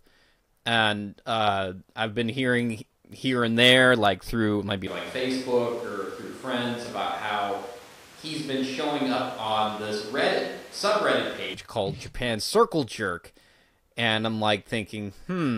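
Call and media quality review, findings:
Speech goes roomy and hollow at 4.87 s, right after "there like through maybe", until 11.54 s. About 5 dB quieter, thinner low end, room noise around 20 dB under speech. Likely a switch to a distant microphone after the close mic dropped.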